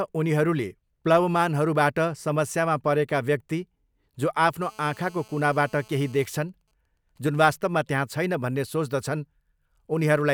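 From 4.62 to 6.26 s, GSM phone buzz sits under the speech. A 2G phone nearby is in a call and transmits 217 bursts a second. The audio circuit rectifies those radio pulses. The result is a hard, raspy 217 Hz buzz with many harmonics. It stays steady, about 29 dB below the speech, and is unrelated to it.

From 6.37 to 7.70 s, GSM signalling bursts take over. The call continues, but the phone's user falls silent. The phone now sends only short groups of bursts, which are rectified the same way. They give even ticks with a longer 217 Hz buzz twice a second. These are faint, around 45 dB down.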